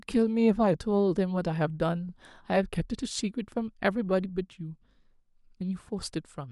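CD scratch ticks appear from 1.82 to 2.50 s in the speech: six short ticks, each lasting no more than a couple of milliseconds. A blemish on the disc wiped out more data than error correction could rebuild on successive turns, so the player patched or muted those samples.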